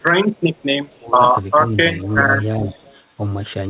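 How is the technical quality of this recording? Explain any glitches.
The recording is speech carried over a call and marred by two recurring faults: a faint delayed echo of the talker and brief dips in the voice when both sides overlap. The whole clip is band-limited to about 4 kHz, which fits a narrowband telephone codec.

Echo leak appears at 0.35–0.64 s, 0.87–1.01 s, 2.01–2.24 s and 2.66–2.95 s. The likely cause is a loudspeaker at the far end whose echo canceller did not fully remove what its microphone picked up, so the talker's own sound came back 388 ms late. The first two instances sit about 40 dB below the speech and are barely audible. The later ones, at about 20 dB and 25 dB down, are a clearer trailing repeat.

Speech suppressed in double talk occurs at 1.03–1.19 s, 1.56–1.77 s and 2.59–2.66 s. The likely cause is the echo canceller treating overlapping sound from both sides as echo and turning the talker down with it. 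The dips are about 5 dB in the first and third instances and about 10 dB in the second, lasting roughly 150 ms, 200 ms and 70 ms. They are heard as the voice briefly sagging or pulling back.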